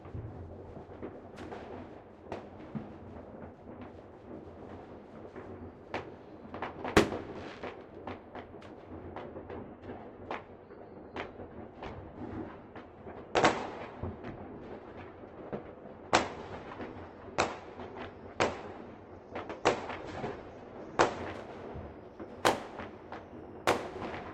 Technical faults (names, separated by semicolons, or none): adaptive stream at a lower bitrate